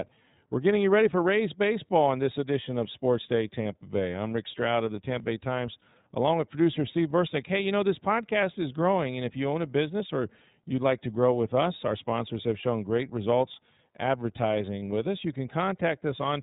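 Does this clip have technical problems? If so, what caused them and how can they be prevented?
Yes. The whole clip has been through the iLBC codec, the narrowband VoIP coder, and the damage is plainly audible: nothing above 4 kHz, so the speech sounds dull and boxed in, with a slightly rough, synthetic edge from the codec rebuilding each frame's excitation on its own. The sound fits 30 ms frames at around 13.3 kbps. To avoid it, carry the call or recording over a wideband codec such as Opus instead of iLBC.

There are also three lost iLBC frames, each a gap of about 30 ms, which fits a single lost frame: at 3.63 s, at 5.79 s just before "along with producer", and at 14.80 s just before "with us". In each gap the decoder fills in by repeating the last pitch cycle blended with noise, so you hear a brief held, buzzy vowel, and the audio snaps back right away because each frame decodes independently. 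Preventing this means fixing the packet loss itself, with a more stable network, a bigger jitter buffer, or forward error correction.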